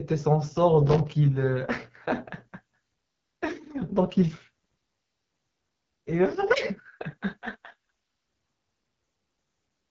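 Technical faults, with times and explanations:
Throughout: AMR wideband (HD Voice) codec. The speech has the rough, raspy edge this codec gets at its bottom rates, which fits about 8.85 kbit/s. The vocal model runs out of bits and the top band is just shaped noise. Nothing sits above 7.6 kHz.
0.87 to 1.11 s: processor overload crackle. For about a quarter second there's gritty tearing as the processor keeps missing buffer deadlines. Each miss drops a few milliseconds of silence with hard edges, roughly a dozen or more in a row, and those clicks blur into crackle.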